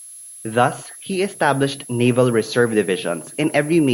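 From the first moment to the end, a thin high whistle sits under the speech, wandering between roughly 10.8 and 11.1 kHz at around 20 dB below the talker. That's a switching supply whistle: a switch-mode power supply somewhere in the chain has dropped into an audible burst mode, or is beating against another supply, and its drifting tone bleeds into the audio.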